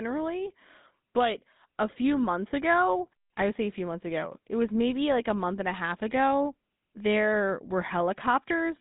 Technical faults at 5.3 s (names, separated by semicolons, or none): GSM full-rate codec